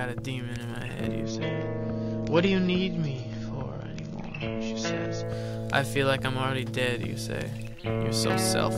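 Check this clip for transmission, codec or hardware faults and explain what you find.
One fault: an adaptive stream at a lower bitrate, from 1.23 s to 5.23 s. For those four seconds the stream fell back to a cheaper encoding of the same audio, most likely because the connection slowed. The sound points to a drop from a mid-rate AAC stream to a low one, around 24 kbit/s. With fewer bits, codec artefacts rise and the treble is cut, with nothing above 7 kHz. Quality switches suddenly at both ends, without any gap.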